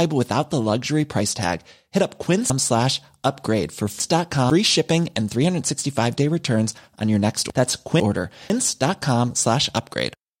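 Between 2.5 and 4.5 s, chunks play out of order: a 500 ms chunk lands three positions late, so the speech jumbles across three hard joins. From 7.5 to 8.5 s, one 500 ms chunk arrives one place late, briefly scrambling the sequence.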